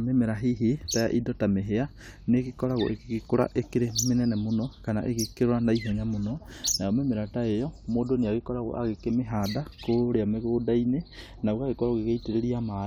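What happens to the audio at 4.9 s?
Nothing goes wrong at 4.9 s; the speech carries on intact through that moment, with no dropout, click or distortion to be heard.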